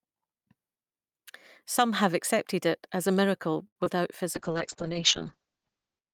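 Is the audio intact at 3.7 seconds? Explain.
No. Just after "it as a miracle", from 3.67 to 3.78 s, there is a short stall from a late packet. The jitter buffer ran dry, so the last sound was stretched for 86 ms. Nothing is lost, but that sound is held too long.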